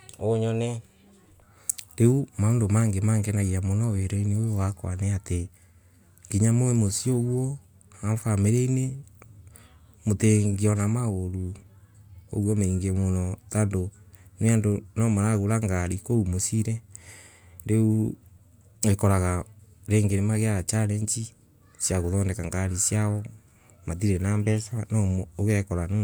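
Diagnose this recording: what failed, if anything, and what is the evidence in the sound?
No faults detected in this recording.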